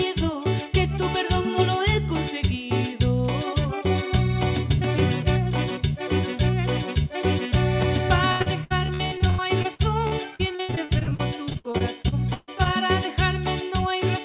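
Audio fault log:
8.32–12.67 s: repeated packet loss (robotic sound). Thirty dropouts, the longest 137 ms, are each filled by extending the previous sound, so about 28% is synthetic and choppy.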